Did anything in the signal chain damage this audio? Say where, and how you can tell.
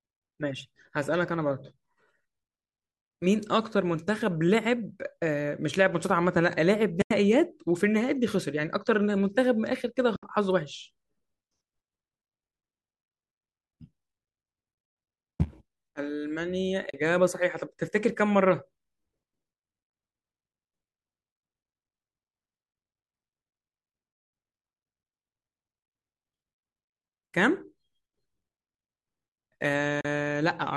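Yes, AAC frame loss with muting in network delivery: soft-edged dropouts at 7.02 s (90 ms), 10.16 s (70 ms), 14.72 s (scattered over 120 ms), 16.90 s and 30.01 s (40 ms each). The likely low-delay AAC decoder zeroed the lost frames, and its overlapping windows faded the sound out and back in.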